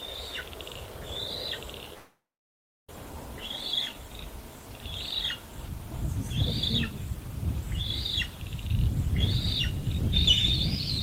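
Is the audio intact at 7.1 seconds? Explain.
Yes, the audio at 7.1 seconds is intact, with no dropout, click, distortion or other audible fault at that moment.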